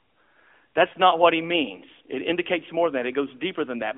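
From 0.90 to 0.96 s, just before "not what he means", lost AMR speech frames leave about 40 ms of concealed sound, which fits two dropped frames. Unlike a plain dropout to silence, the decoder repeats the last pitch and vocal tract settings at falling gain, giving a brief warbly dip before speech returns weakly.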